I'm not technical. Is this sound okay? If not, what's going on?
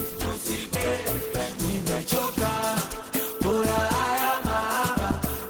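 No. At about 0.75 s there is a skip ahead: about a second of sound was dropped on its way to you, while later sound was already waiting. Playback jumps straight forward with no gap, so that second is missing and the two sides meet almost directly.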